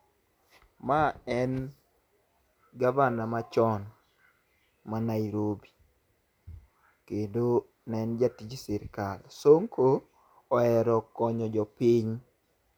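No technical faults are audible.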